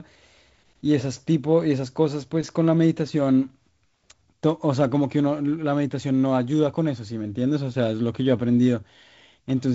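Speech recording; no technical faults can be heard.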